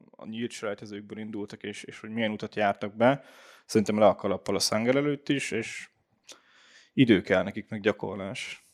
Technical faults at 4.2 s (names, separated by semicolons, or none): none